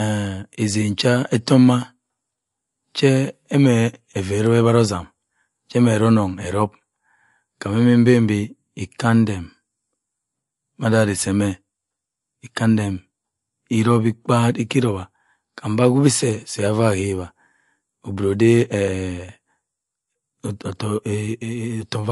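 Throughout, the speech carries plainly audible damage, likely from MP3 compression at a low rate fitting roughly 48 kbps. It sounds watery and swirly, and a spectrogram shows nothing above 11.3 kHz plus flickering high-frequency patches.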